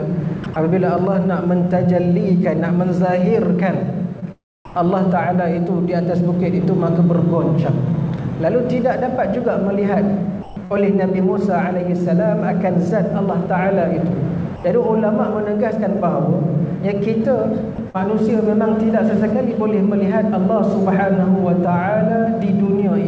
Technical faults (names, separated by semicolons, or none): sound chopped by the voice detector; short concealed packet loss; sound dropped by the voice detector